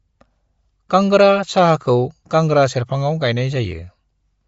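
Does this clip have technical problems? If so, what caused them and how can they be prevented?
Yes. Throughout the speech there is plainly audible codec damage, most likely from Bluetooth LC3 compression. Nothing is present above about 7.7 kHz, and the upper band has a breathy, grainy texture where the encoder has discarded spectral detail and filled the gaps with shaped noise. The character fits a low-rate transform codec running on 10 ms frames at roughly 32 kbps. Prevent it by recording locally or over a wired path, or by configuring the Bluetooth LE Audio link for a higher bitrate and full-band sample rate.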